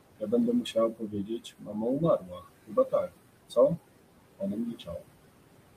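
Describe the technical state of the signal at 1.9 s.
At 1.9 s the speech is being cut by the noise suppressor, inside a stretch from 0.62 to 2.44 s where about a second of speech in total is affected. The suppressor mistakes soft speech for noise and pulls it down by up to about 19 dB, so the affected speech sounds swallowed or faint. Unlike a dropout, nothing goes fully silent. Noise suppressor artifacts run through the whole clip, lowering the background by about 21 dB between phrases.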